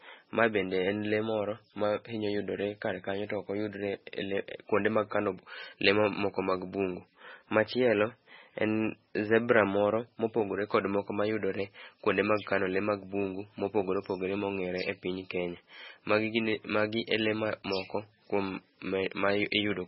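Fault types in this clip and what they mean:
MP3 compression: The speech has nothing above 5.6 kHz for the whole clip, and the heavy, watery swirl on what remains points to a very low bitrate, which fits roughly 16 kbps. Starved of bits, the encoder likely cut the treble at a fixed point and dropped weak frequency lines that flicker between frames, so s sounds turn chirpy and metallic and onsets smear. A plain low-pass filter would dull the top without that warbling texture.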